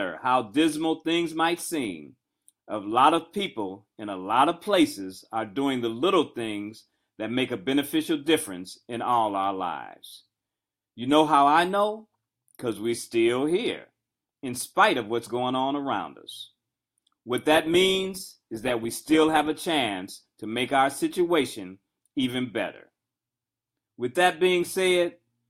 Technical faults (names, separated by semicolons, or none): adaptive stream at a lower bitrate